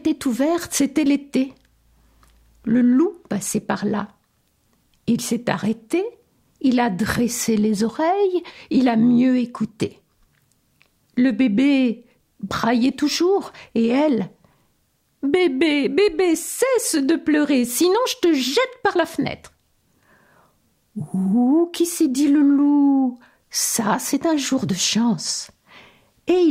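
No technical faults can be heard anywhere in the audio, and the signal holds steady throughout.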